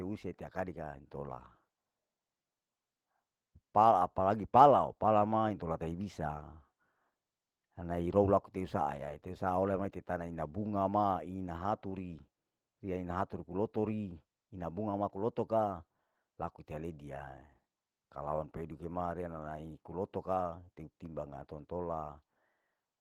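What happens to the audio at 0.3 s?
At 0.3 s the speech carries Opus voice compression, present across the whole clip rather than a single event. Below 8 kHz a linear-prediction coder models the voice, and a coarser transform layer fills the band above. The sound is plainly hoarse and slightly robotic, consistent with a bitrate around 16 kbps. On a spectrogram the upper band looks patchy and smeared, with texture changing in steps that fit 20 ms frames.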